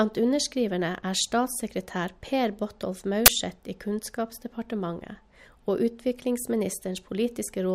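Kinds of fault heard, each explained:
Uninitialised buffer: At 3.26 s the speech is hit by a short, very loud burst of harsh digital noise lasting about 21 ms. A block of audio was sent to the output before anything had been written into it, so whatever data was left over in that memory was played as if it were samples. The burst's length fits a single 1024-sample buffer.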